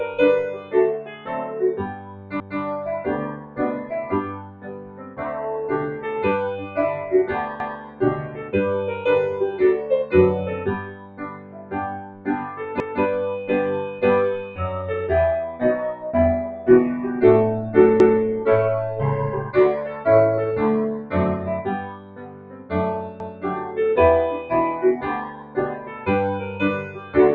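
A noise suppressor applied to music or sounds runs throughout. It mistakes held tones and tails for noise, so the level pumps by around 15 dB.

Sound cut by the noise suppressor comes at 0.53–5.21, 6.62–8.54, 10.82–12.27, 13.92–14.59, 19.47–20.06, 20.99–23.77 and 25.25–27.15 s. Sustained parts sink by about 7 to 12 dB while attacks pass.

Overlapping chunks occur at 2.40, 7.60, 12.80, 18.00 and 23.20 s. Each 5 s chunk starts 200 ms early. That 200 ms plays twice, giving a regular stutter.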